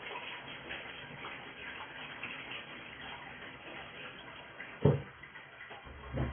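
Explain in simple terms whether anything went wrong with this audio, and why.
AAC compression, from start to finish: the sound is dull and smeared with a warbly, fizzy edge, likely from squeezing it into very little data, which discards fine detail.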